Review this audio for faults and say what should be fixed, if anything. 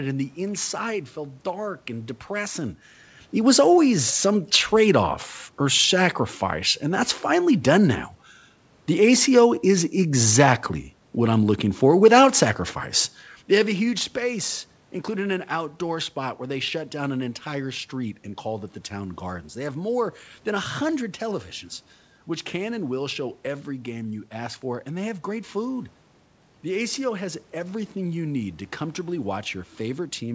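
Nothing to fix: the level changes early on and again near the middle are the talker moving relative to the microphone, and the room noise and the band ending at 8 kHz fit a normal wideband call route.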